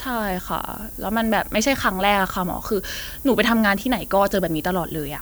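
From start to finish, the speech carries a steady, thin hiss. It gets much brighter toward the top of the band. This is low bit depth with noise shaping. The audio is held at about 7 bits, so every sample is rounded coarsely. The rounding error is fed back and pushed up in frequency, away from the middle of the speech. The hiss sits only about 15 dB below the speech. It is heard under every sound and in the gaps.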